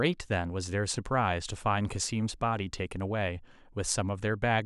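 No technical faults occur at any point in the clip, so there are none to describe in time order.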